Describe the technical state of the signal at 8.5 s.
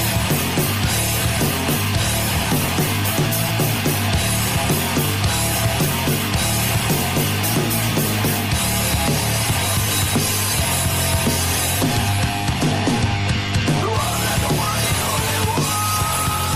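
At 8.5 s the sound carries plainly audible MP3 compression damage, present throughout the clip rather than at that moment alone. The likely cause is lossy MP3 encoding at a low bitrate, consistent with about 64 kbps: the encoder zeroes weak frequency lines that flicker between frames. It sounds watery and swirly, with smeared attacks. A spectrogram shows speckled, gappy high bands.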